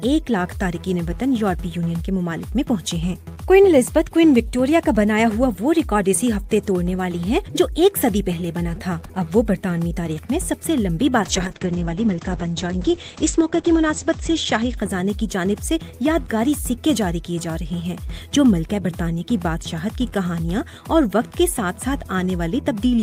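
From 11.23 s to 17.17 s a call bitrate drop makes the encoder code far more coarsely, which fits a fall from around 48 to 9 kbps. The top end narrows from 20 kHz to 8 kHz, and the sound turns rough and watery, worst for about 2.1 s. Unlike a plain low-pass filter, it adds coarse coding grit and then recovers, with no gaps.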